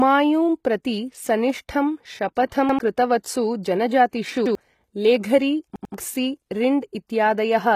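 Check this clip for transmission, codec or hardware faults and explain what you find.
Yes, the clip has three kinds of fault: codec damage across the whole clip, three brief pre-echoes, and three repeated-buffer stutters.

HE-AAC compression runs through the entire speech clip, and the damage is plainly audible. Nothing is present above 14.9 kHz. The treble is likely rebuilt by spectral band replication, in which lower bands are copied upward and shaped with a coarse envelope, which fits a low bitrate of around 20 kbps. On a spectrogram, the upper band looks smeared and blocky, and its harmonics fail to line up with those below the crossover. Sibilants come out gritty, metallic or lispy.

Pre-echo appears at 2.35 s (13 ms), from 2.49 to 2.52 s (27 ms), and at 3.23 s (12 ms). The transform codec spreads quantisation noise across a whole block. When a sharp onset lands late in that block, the noise meant for the loud part leaks into the quiet moment before it. 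The waveform shows a fuzzy ramp just ahead of each attack, and the spectrogram shows a thin vertical haze before the onset. Each attack is heard as a short hiss and a softened start.

A repeated buffer occurs from 2.69 to 2.79 s, from 4.46 to 4.55 s, and from 5.76 to 5.94 s. Fresh audio missed its deadline, so the device replayed its last chunk of about 93 ms, which fits a 4096-sample buffer. The chunk plays once extra at the first two points and twice extra at the third, and roughly a tenth of a second and two tenths of a second of real audio are lost. The waveform shows identical copied segments with abrupt seams, and each repeat is heard as a stutter.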